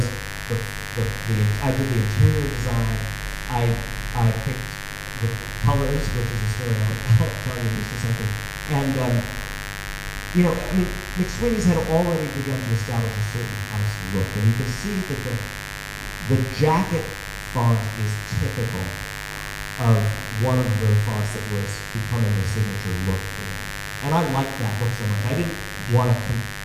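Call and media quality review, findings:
Mains buzz, whole clip. Steady raspy buzz on a 50 Hz fundamental, harmonics into the kHz range, roughly 10 dB under the signal. Probable component: dimmer, rectifier or unshielded cable in the capture chain. Mechanism: switching spikes twice per mains cycle couple into the audio path.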